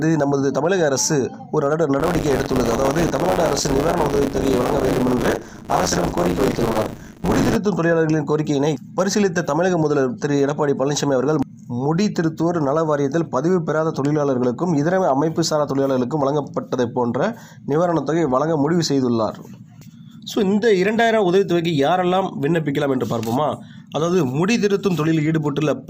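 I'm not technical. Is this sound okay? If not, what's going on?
No. Buffer tearing from 1.99 to 7.57 s: playback fell out of step, splicing older audio into each chunk and producing a robotic buzz 100 times a second.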